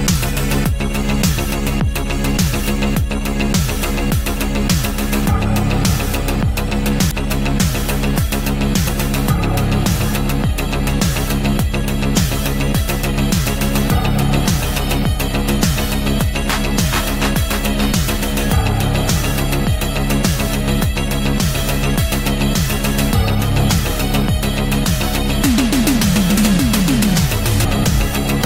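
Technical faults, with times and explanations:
7.11 s, 8.87 s and 27.63 s: damaged data in a compressed stream. At each point part of the encoded stream was corrupt, so the decoder could not read the frame it expected, lost its place and had to hunt for the next valid frame header before it could resume. Each event lasts under 20 ms and comes through as a short chirp or blip that cuts across the surrounding audio.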